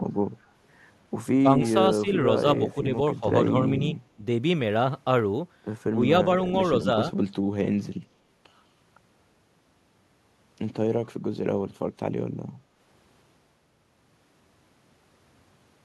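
Speech with a brief echo leak at 0.43 to 0.48 s: a very faint copy trailing by about 201 ms, likely from a loudspeaker echo the far-end canceller missed, unlike reverb, which has no discrete delay. Short, shallow-to-moderate level dips at 1.43 to 1.68, 2.02 to 2.13, 2.75 to 2.85, 3.2 to 3.24, 4.16 to 4.23 and 5.92 to 6.0 s sound like speech suppressed in double talk. Unlike dropouts, the talker turns down rather than vanishing.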